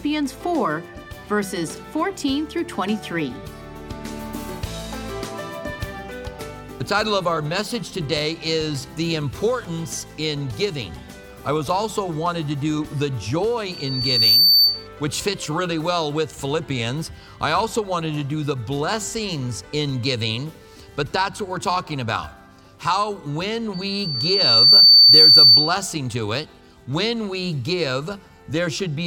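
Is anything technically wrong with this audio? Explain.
Yes. Loudspeaker feedback squeal occurs from 13.67 to 14.87 s and from 23.73 to 25.83 s, a 4.6 kHz tone where the microphone-loudspeaker loop gain passes one. Unlike a constant interference whine, it swells, over roughly 0.7 s and later 1 s, to about 10 dB and later 15 dB above the sound.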